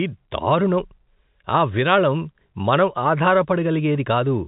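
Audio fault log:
No faults heard.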